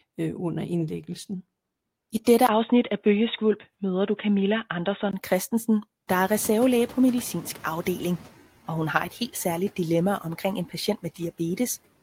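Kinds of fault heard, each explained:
Input switched to a poorer device: Right after "I dette", around 2.47 s, there's a tiny 20 ms gap, then the sound goes dull and boxy until about 5.13 s. The level hardly changes and a faint new noise floor sits well under the speech. That narrow band points to the recording likely hopping to a weaker mic or a headset call profile for those couple of seconds.
Noise suppressor catching up: Around 6 s the room noise itself jumps by about 19 dB, which is real background in the room, not a fault. The suppressor's noise estimate lags, so from 6.07 s the noise comes through under-reduced and only settles over roughly 2.2 s, reaching about 6 dB of reduction by 8.29 s, just before "og hun har et".
Speech cut by the noise suppressor: Just after "særligt dilemma omkring en", between about 10.69 and 11.2 s, the suppressor mistakes bits of speech for background and turns them down along with it. 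It's only around a tenth of a second in total, but the deepest dip is about 11 dB, so those moments sound swallowed or faint next to the surrounding speech.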